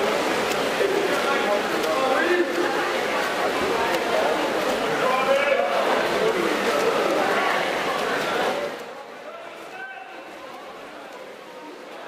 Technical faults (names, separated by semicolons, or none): none